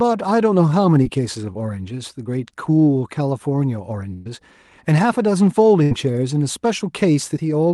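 A speech recording carried over a call link, with audio that stops around 12 kHz, consistent with an Opus-style call codec. From 1.03 to 1.07 s there is a short concealed packet loss. About 20 ms of audio never arrived in time. The receiver papered over the hole by extending the sound just before it, then blended back in. The result is a brief smear or wobble rather than a gap. A burst of packet loss hits from 4.13 to 4.27 s. Roughly 120 ms went missing in a row. The decoder kept stretching the last sound and let it fade, so you hear a held buzz or dying hiss. The audio never drops to silence. Speech then picks up further on, with that stretch gone. A second burst follows from 5.83 to 5.93 s. This one loses about 80 ms and is covered the same way, a shorter synthetic tail before the audio resumes.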